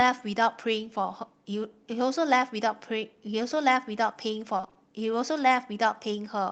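From 4.57 to 4.77 s, repeated packet loss (robotic sound) sets in. Short holes, the longest 20 ms, are patched by stretching earlier sound. About half that stretch is filled in, so it sounds choppy.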